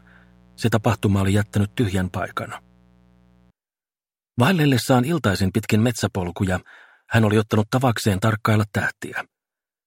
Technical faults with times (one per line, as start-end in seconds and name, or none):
0.00-3.51 mains buzz